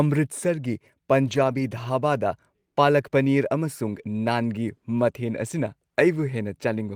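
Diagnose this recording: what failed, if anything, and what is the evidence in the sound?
Network loss patched by the codec: lost packets rebuilt from error correction. Around 1.23 to 1.61 s, and briefly at 5.57 s, the speech turns rough and noisy without any gap, since the decoder played the low-bitrate copies carried in the following packets.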